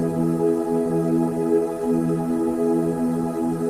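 No technical faults can be heard anywhere in this audio. There is nothing in it that needs a timestamp or a cause.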